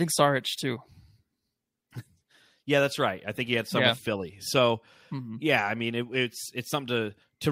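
No technical faults can be heard anywhere in the recording.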